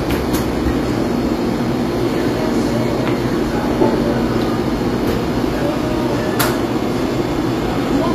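Throughout the audio, HE-AAC compression is the likely cause of a plainly audible degradation: content stops near 14.9 kHz, and the treble above the crossover sounds synthesized, gritty and metallic, with high partials not matching the lower spectrum. This fits a low bitrate around 24 kbps.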